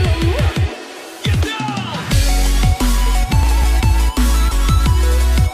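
From 3.43 to 3.84 s a gritty burst of crackle tears through the sound: processor overload crackle, with around ten tiny buffers of a few milliseconds each skipped entirely.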